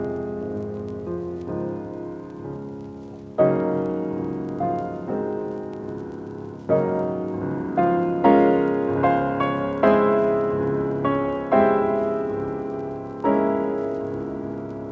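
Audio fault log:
The signal has passed through call microphone processing, which trims the lowest bass with its high-pass filter and leaves no content above 8 kHz, both normal results of that path.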